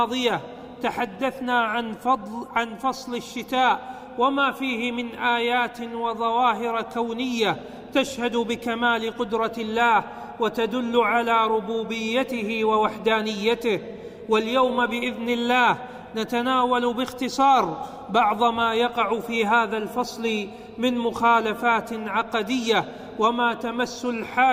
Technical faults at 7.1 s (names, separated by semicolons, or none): none